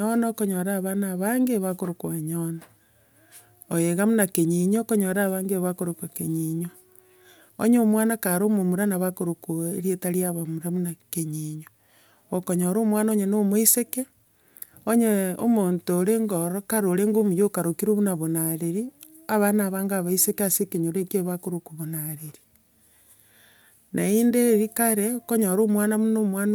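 No technical faults can be heard anywhere in the recording.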